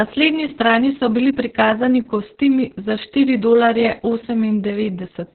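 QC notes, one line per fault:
Throughout: Opus voice compression. The speech sounds muffled, hoarse and faintly robotic, with nothing above about 4.2 kHz, so sibilants and breath detail are dulled. That narrowband ceiling and the coarse, buzzy texture point to Opus's SILK linear-prediction coder at a very low bitrate, which fits about 6 kbps. The coder drops the upper band entirely and quantises the excitation so roughly that the voice's natural grain turns rasping and synthetic. It was coded in long frames, around 60 ms.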